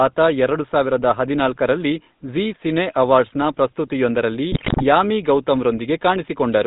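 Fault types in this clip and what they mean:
GSM full-rate codec: Heard across the whole clip as a buzzy, gravelly roughness laid over the speech, with the top end missing above 4 kHz. The damage is plainly audible and steady, which fits a 13 kbps full-rate encoder that rebuilds the voice from a vocal-tract filter fed by sparse, regular pulses. Unlike packet loss or dropouts, it never comes and goes. The grain runs through the speech, with the faint room noise well beneath it.
GSM bit errors: From 4.52 to 4.85 s the speech suddenly breaks into squawks, pops and gargling, then settles back to the ordinary codec buzz. Corrupted filter, pitch and gain values make the decoder warp the spectrum or jump in level frame after frame while the bad patch lasts, and here the errors land densely enough to suggest a rate of roughly 8 percent. Unlike the constant codec roughness, this is a brief, violent burst confined to one short stretch.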